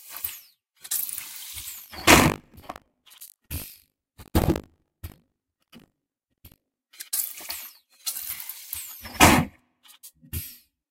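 A recording of everyday sounds with buffer tearing from 1.76 s to 6.81 s. Over that stretch a hard, robotic rattle rides on the sound at 50 Hz. That rate points to a 20 ms buffer period. The writing program and the playback hardware have slipped, so they cross inside each period. Roughly a sixth of every buffer replays audio from about 70 ms earlier, with abrupt joins at each edge.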